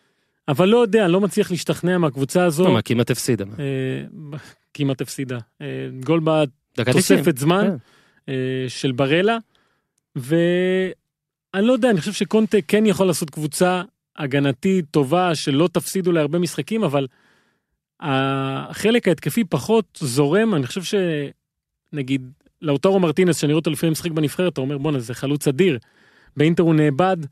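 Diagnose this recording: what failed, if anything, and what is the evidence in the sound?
Nothing in this speech recording points to a failure at any stage of the chain, so there's no fault to diagnose here.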